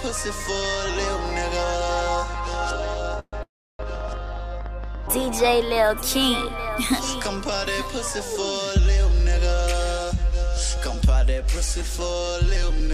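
From 0.09 to 5.56 s a train of clicks runs over the sound, about thirty of them at an uneven average of 6.7 per second. Each peaks about 5 dB above the surrounding audio and ticks through quiet stretches too. On a waveform they are isolated sharp spikes. On a spectrogram they are thin vertical lines spanning the whole frequency range, unevenly spaced, most likely from electrical interference or a struggling interface injecting pulses. Inside that span come two call audio freezes. The first, 3.19 to 3.35 s, fills 132 ms. The second, 3.43 to 3.81 s, fills 365 ms. In each, the last sound is drawn out as a fading buzz before dropping to near silence, about 40 ms of it in the first and 310 ms in the second. Nothing is lost, and the audio resumes where it stopped, later each time. The likely cause is delayed packets draining the jitter buffer. A spectrogram shows smeared, flat horizontal bands decaying into a blank gap, and the waveform shows the envelope collapsing to a flat line. 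Between 10.04 and 11.98 s a jitter buffer speed-up plays the audio at 102% speed with pitch unchanged. The receiver trims short pitch-period slices, roughly 40 ms in total, to shrink an overfull buffer. On a waveform the periodic cycles keep their spacing, and the spectrogram's harmonic lines stay at the same height while events arrive a little early.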